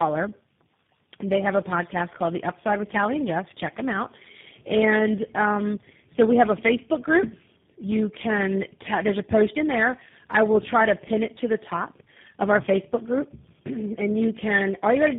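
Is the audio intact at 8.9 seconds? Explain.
No. At 8.9 s the speech carries tandem speech coding, which runs through the whole clip. The sound points to several speech codecs in a row, each decoding and re-encoding the previous one's already damaged output, so the errors compound. The result is rough, muffled and warbly, with nothing above 3.7 kHz. A single low-bitrate codec at the same band limit would sound cleaner; here the layered grit and wobble exceed what any one coder produces.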